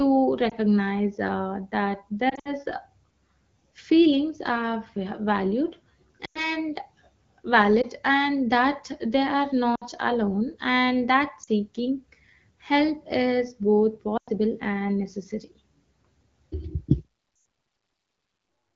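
Wideband speech over AMR-WB, clear enough to fit a rate around 12.65 kbit/s, but hit by lost AMR speech frames at 0.49, 2.29–2.53, 6.25–6.55, 7.81–7.86 (just before "and that they are"), 9.75–9.84 (between "and that they are" and "alone and"), 11.43–11.49, 14.17–14.29 (after "help is both") and 17.35–17.45 s. Radio errors corrupted frames, and the decoder papered over them by repeating the last good settings at fading gain. The shorter gaps are quick dips or warbles. The longer ones, up to about 100 ms, smear and drop out before the voice returns a bit rough.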